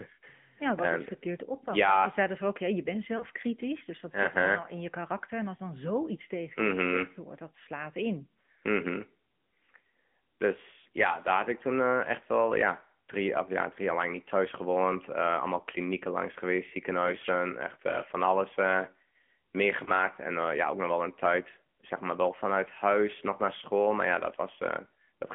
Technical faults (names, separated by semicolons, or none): AMR narrowband mobile codec; lost AMR speech frames